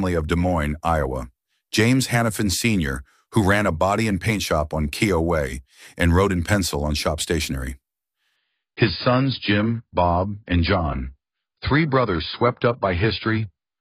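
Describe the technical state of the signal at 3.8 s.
At 3.8 s the signal is intact, with no fault present at that moment.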